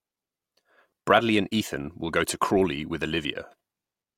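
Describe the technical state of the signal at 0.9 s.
At 0.90 s the speech briefly turns into a noisy smear, a hiss-like blur lasting about 15 ms where the clean tone of the sound is lost. This is lost LE Audio frames: the Bluetooth LE Audio stream dropped data, and the LC3 decoder covered the gap by repeating the last received spectrum with randomised signs. That keeps the energy but destroys tonal detail. The duration fits two lost frames, too short for any audible fade.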